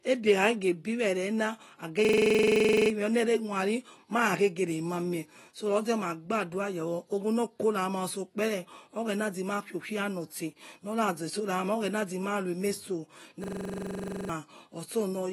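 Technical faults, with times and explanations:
Throughout: AAC compression. The speech has plainly audible codec damage, and nothing is heard above 12 kHz. That cut-off and the dull, smeared texture fit a low-bitrate AAC-LC encode at around 32 kbps, which is the likely cause. At that rate the encoder quantises its frequency lines coarsely against a hearing model, drops the top band, and leaves gaps in the spectrum. This is why sibilants sound fizzy and sustained sounds warble.
2.05–2.90 s and 13.44–14.29 s: system hang loop. In each span one 42.67 ms slice of audio repeats exactly, 20 times over, at 23.4 Hz. The host stalled while the sound hardware kept cycling through its ring buffer, which fits a 2048-sample buffer. Roughly a second of speech is missing after each loop, so the talk jumps ahead when playback resumes.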